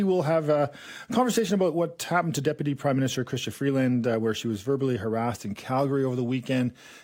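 No dropouts, glitches or level faults turn up anywhere in the recording.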